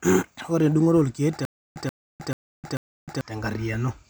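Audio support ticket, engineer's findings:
Stutter with silent gaps, 1.45 s to 3.21 s. A 131 ms speech fragment repeats 4 times, each followed by about 308 ms of digital silence, on a steady 440 ms cycle. Audio due in that span is missing. Component: likely player or stream stall, with each retry replaying the last buffered fragment before running dry.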